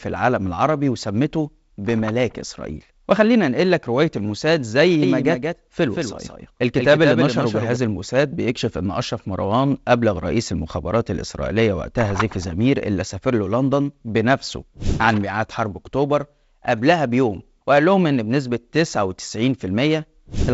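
From 5.02 to 7.76 s the speech is heard twice: a full-band copy trails the original by roughly 200 ms, a few decibels quieter, with no decay or room colour, and it starts and stops abruptly at those edges. This is a doubled audio track, likely caused by the same audio being mixed in a second time, either captured again through a slower path or left as two out-of-step copies by an edit. Under G.722 coding, the band still stops near 7.7 kHz.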